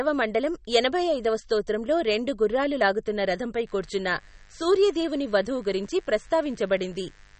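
From the first moment the speech carries a watery, swirling quality, with sibilants that chirp and consonant onsets that smear. Nothing reaches above 8.4 kHz, as if the treble were sliced off at a fixed line. The likely cause is MP3 compression at a low bitrate, around 32 kbps. Short of bits, the encoder discards the top band and lets weak frequency lines flicker on and off between frames. That flickering is what separates it from a plain low-pass filter, which would sound dull but steady.

At 3.67 s a mains buzz enters and continues to the end of the clip. Sharp switching spikes arrive twice per 50 Hz cycle, adding a dense ladder of 50 Hz harmonics that climbs well into the kilohertz range. It sits low, well beneath the speech, but its rasp stays constant. That harshness tells it apart from a smooth mains hum, which would be a soft, nearly pure low tone with few harmonics.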